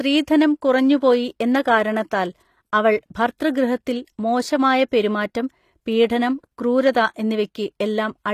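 Throughout, the speech likely went through HE-AAC compression at a low bitrate, around 24 kbps: only the lower spectrum is coded and the treble is rebuilt from copied bands, so s sounds turn gritty and lispy, with nothing above 14.9 kHz.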